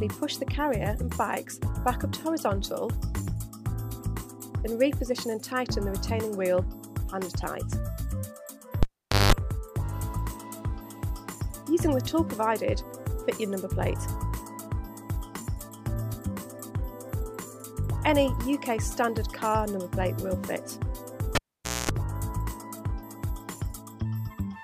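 At 8.83 s and again at 21.35 s the cable gets pulled and plugged in: a pop, about half a second of near silence, then tip-contact mains buzz (50 Hz, then 60 Hz) before another pop.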